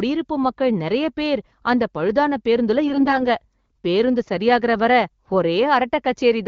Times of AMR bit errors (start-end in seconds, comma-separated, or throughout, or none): 2.86-3.26